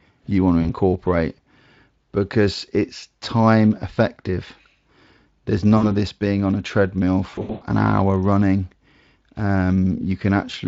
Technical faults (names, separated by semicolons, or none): VoIP packet loss concealed by the speech codec